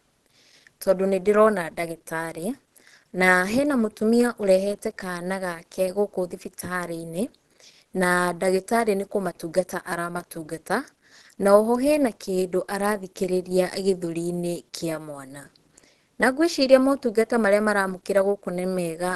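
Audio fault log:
Throughout, Opus compression: the speech has a muffled, hoarse, grainy edge and nothing at all above about 12.3 kHz, so the top end just stops. The damage is plainly audible the whole way. That dull, rough quality is what you'd expect from Opus squeezed down to a low rate, likely around 16 kbps, where the encoder falls back to its hybrid speech mode at super-wideband bandwidth and fills what it can't afford with noise.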